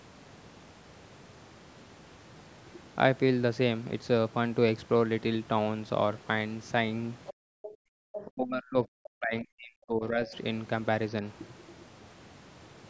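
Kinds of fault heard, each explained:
Other side's voice leaking through: A faint second voice surfaces in three short scraps, at 7.26 to 7.34 s, 7.62 to 7.72 s and 8.13 to 8.25 s, each about a tenth of a second and sitting well below the main talker, roughly 15 dB down. The likely cause is loudspeaker playback of the far end reaching the microphone, with the echo canceller leaving small residues of it in the signal.
Background gated by the echo canceller: From 7.34 to 7.97 s the room tone around the talker drops away abruptly, with a hole of about 40 dB at its deepest and about half a second affected in total, before the ambience returns. This happens because the echo canceller detected loudspeaker activity and clamped the microphone path hard, taking the background down with whatever echo it was trying to remove.
Speech suppressed in double talk: From 8.25 to 10.34 s the talker's own speech is pushed down in pieces, dipping very deeply at its worst and affecting around two seconds in all, right after the last leaked scrap. 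This is likely both ends talking at once, with the echo canceller unable to separate the local talker from the loudspeaker echo and attenuating everything it picked up.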